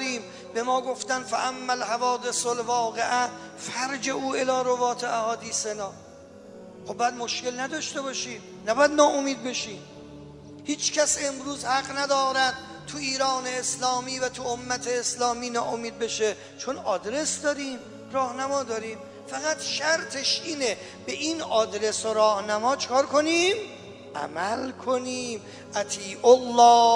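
The signal shows no technical faults at any point.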